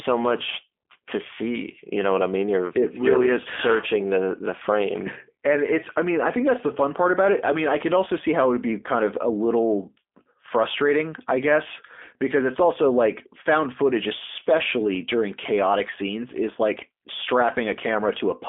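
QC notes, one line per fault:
throughout, G.729 codec: speech band-limited to 250 Hz to 3.5 kHz and rebuilt from filter, pitch and pulse parameters, plainly rough and synthetic, fitting 8 kbit/s G.729A.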